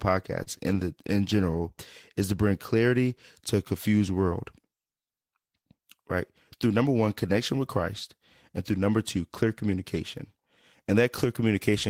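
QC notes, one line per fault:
0.43–0.50 s, short stall from a late packet. A packet arrived late and the jitter buffer ran dry, so the receiver stretched the last sound by 31 ms until it came. Nothing is lost. The sound before "in the" is held too long, with a brief buzz or dip.
6.66–6.85 s, jitter buffer speed-up. The buffer had built up extra delay, so the receiver cut short pitch-period pieces in quick succession, roughly 40 ms in all. Speech runs at 117% speed with unchanged pitch and sounds hurried.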